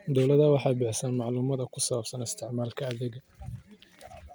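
Speech, with no technical fault to report. Nothing in the recording points to a problem in how it was captured, processed or delivered.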